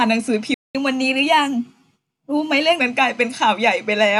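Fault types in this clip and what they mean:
Playback stall: The speech cuts out at 0.54 s and stays silent until 0.75 s, a gap of about 205 ms. It stops in mid-flow, not at a natural pause. The likely cause is that the player ran short of data or its thread was held up. Nothing was sent to the output during that time. When the sound returns, it carries on from the point where it stopped.
Catch-up at higher speed: Right after the gap, from 0.75 s to 2.8 s, the speech runs fast at 1.1 times normal speed. The player is resampling its backlog to win back the time lost in the stall. Because resampling moves speed and pitch together, the pitch rises by roughly one and a half semitones. The speech sounds hurried and slightly higher. Both settle back to normal at 2.8 s.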